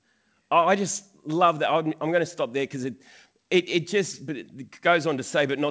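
The speech reaches the listener intact over what sounds like a wideband call codec such as G.722, with its content stopping at about 8 kHz and nothing heard that departs from normal transmission.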